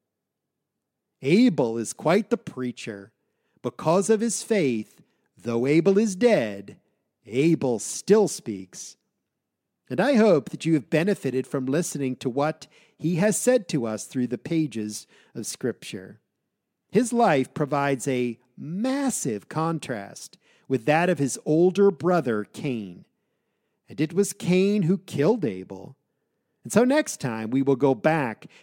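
No technical faults are audible.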